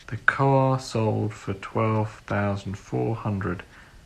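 No technical faults are audible anywhere in this speech recording.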